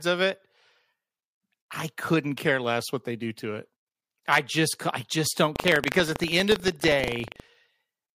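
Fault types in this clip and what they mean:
Buffer tearing: the app writing the ring buffer and the hardware reading it have drifted, so stale audio about 150 ms old keeps slipping in. From 5.52 to 7.51 s the speech gets a robotic 25 Hz rattle, pointing to roughly 40 ms periods, each with a small torn slice.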